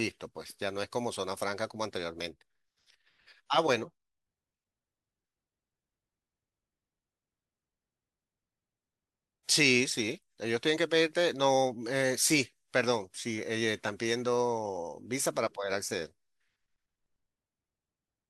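A corrupt frame decoded at 15.88 to 15.92 s cuts briefly into the speech: damaged bits in what sounds like a single compressed frame were played anyway, so misread values push energy to wrong frequencies, giving a short blip peaking around -30 dBFS.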